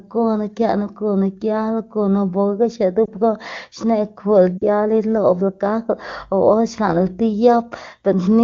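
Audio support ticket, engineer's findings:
Brief dip and warble at 3.06–3.10 s, longer dropout to near silence at 4.58–4.63 s, sound returning weak. Lost AMR speech frames: failed-checksum frames concealed by decoder repeating last pitch and vocal tract parameters with falling gain; gap lengths fit one and two 20 ms frames. Surrounding AMR wideband (HD Voice) audio clean, consistent with a high rate.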